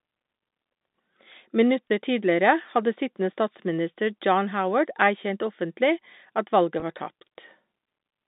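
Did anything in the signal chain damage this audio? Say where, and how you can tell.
Yes, at the network stage: packet loss with pitch repetition, at 1.88 s and 6.80 to 6.82 s. Each gap, consistent with one lost 20 ms packet, is bridged by repeating the last pitch period, giving a brief held, buzzy smear in the telephone-band G.711 sound.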